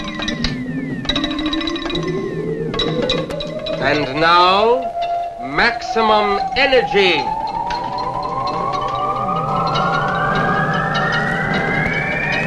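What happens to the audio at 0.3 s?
At 0.34 s, compressed frames are skipped: about two frames, roughly 70 ms of audio, never play, and the sound jumps forward. The jump fits a 32 ms frame length. In a lossy codec, overlap between adjacent frames turns the join into a short smeared blip; lossless frames join with a hard click instead.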